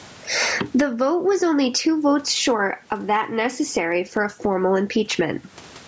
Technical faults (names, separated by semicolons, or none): gain pumping